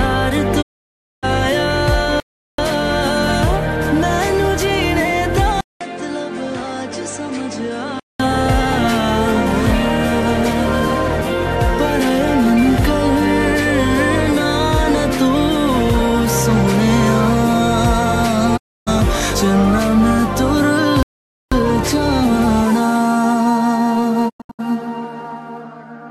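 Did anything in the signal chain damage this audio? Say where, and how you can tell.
Yes, three kinds of damage. First, digital broadcast dropouts in reception: the sound fades out over about 20 ms and goes silent from 0.61 to 1.25 s, 18.56 to 18.89 s, and 24.28 to 24.61 s. The last one is scattered short holes, longest 96 ms. Corrupted frames got muted, and that audio is gone.

Second, at the input stage, from 5.61 to 8.20 s the sound goes dull. The level drops roughly 10 dB, and a new noise floor appears about 45 dB down, with a 200 ms gap at the switch. That's likely the input switched to a poorer device.

Third, at playback, from 21.03 to 21.52 s the output just stops for about 0.49 s mid-flow, then carries on. That's likely a playback stall, with the player starved of data or its thread blocked until the buffer refilled.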